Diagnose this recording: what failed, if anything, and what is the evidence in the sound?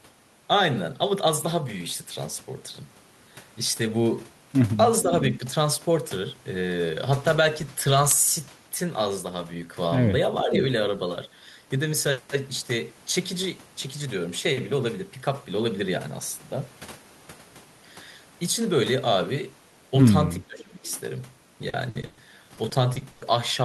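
Echo leak, in call processing. At 5.29 to 5.35 s and again at 10.39 to 10.62 s, a delayed copy of the speech surfaces. It trails the original by 455 ms both times. The first scrap is quiet, roughly 15 dB under the speech. The second is much stronger, only about 5 dB down. The likely cause is a loudspeaker on one side of the call whose echo canceller let part of its own playback through.

Speech suppressed in double talk, also in call processing. At 10.44 to 10.5 s, inside the second echo burst, the speech dips briefly by about 5 dB for roughly 70 ms. At 20.47 to 20.84 s the drop is far deeper, around 20 dB, and lasts about 400 ms. The echo canceller likely could not separate the local talker from the loudspeaker signal, so it turned everything down.

Repeated packet loss (robotic sound), in the network. From 21.69 to 22.19 s there are four gaps. Together they take 240 ms, the longest 120 ms, and they fill 48% of that stretch. 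From 22.55 to 23.23 s five more gaps add 180 ms, the longest 100 ms, covering 26%. Each hole is filled by stretching the last sound. The result is choppy.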